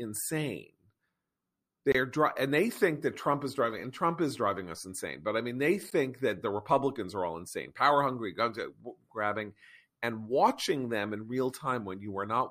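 At 1.92–1.95 s and 5.90 s, a gap at a join of encoded pieces inserts 25 ms and 14 ms of untrimmed encoder padding, showing as smeared-edged blank spectrogram slivers.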